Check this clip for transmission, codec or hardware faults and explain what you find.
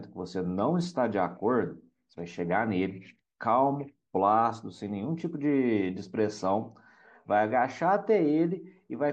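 One codec fault runs through the whole speech clip: plainly audible damage that is likely MP3 compression, at a level that fits a bitrate around 64 kbps. With that few bits, the encoder zeroes quieter frequency lines, which flicker on and off between frames. The result is a watery, swirling texture, metallic chirping on s sounds, and softened consonant attacks.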